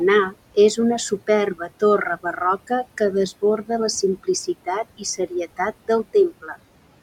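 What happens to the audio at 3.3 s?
At 3.3 s the noise suppressor artifacts, present throughout, pull the room noise down by about 18 dB between words, letting it rise again under them; the spectrogram shows flickering, patchy noise-floor bands.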